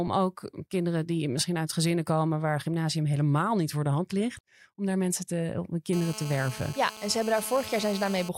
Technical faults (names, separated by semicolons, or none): GSM phone buzz